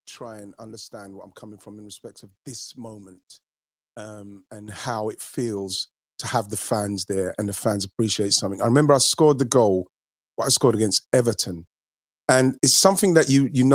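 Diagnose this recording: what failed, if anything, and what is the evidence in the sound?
The microphone volume stepped up twice, a fault in the call processing stage. At 4.68 s, after "this moment um and", the level jumps by about 10 dB. At 5.7 s, after "um and how it", it rises by about another 5 dB. Each time, the call software judged the input too quiet and raised the device's input volume in one step. Speech and room noise rise together and instantly, which tells it apart from a talker leaning closer or from a smooth automatic gain ramp.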